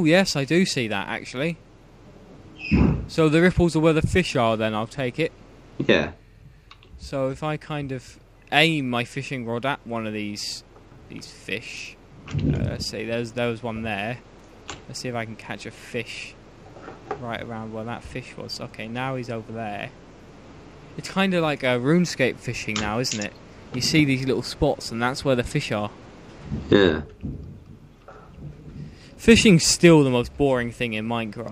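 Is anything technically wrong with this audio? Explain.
No, no technical faults found.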